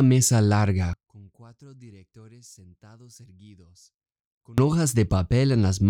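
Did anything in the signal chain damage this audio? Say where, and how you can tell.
Yes. From 0.93 to 4.58 s the speech drops about 27 dB to a faint residue, with a shrunken waveform. This is likely one channel inverted in the analogue wiring, cancelling when summed to mono.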